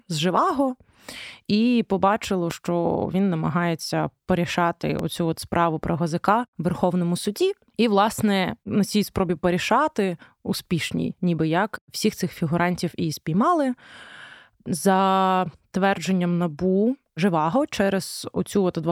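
At 2.51 to 2.53 s you get a loud pop, a single sharp crack that jumps about 10 dB above the speech, and then the same thing again at 4.99 to 5.02 s. Each is one short hit, and the talking carries straight on underneath. It's likely a voltage spike getting into the chain, say from a connector, a switch or a bit of static, which the downstream electronics round off into that clicky thump.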